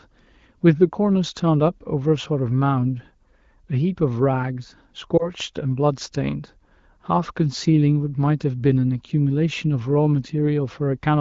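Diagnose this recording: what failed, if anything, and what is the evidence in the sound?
Network stage, over the radio link: at 5.18 to 5.29 s there's a short dip or warble in the speech, which fits a single lost AMR frame. The wideband decoder fills the 20 ms gap by repeating the last good frame with falling gain, and the speech comes back weak or rough for a moment.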